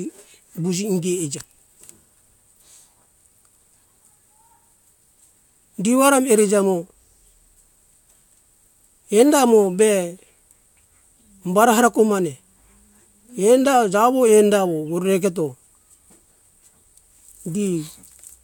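No technical faults can be heard anywhere in the recording.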